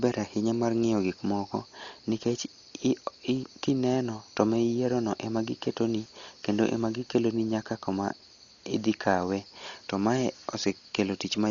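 Throughout, the speech sounds dull and rough, with nothing above 6.9 kHz and fluttery noise around tones, likely heavy Dolby Digital compression fitting a bitrate near 40 kbps.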